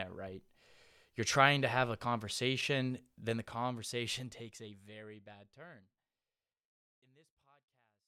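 No technical faults can be heard anywhere in the speech, and the level simply eases down in a smooth fade-out over roughly the last five seconds, ending at 8.08 s.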